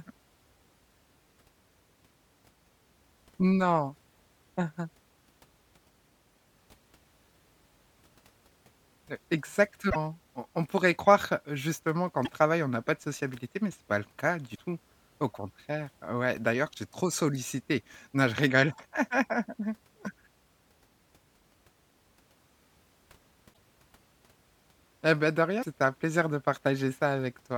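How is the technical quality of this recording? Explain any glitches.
The speech carries five short glitches from damaged data in a compressed stream. They come at 9.86, 12.21, 14.51, 23.50 and 25.59 s, each under a tenth of a second. Corrupted bytes make the decoder misread frames and hunt for sync, producing brief chirps or blips.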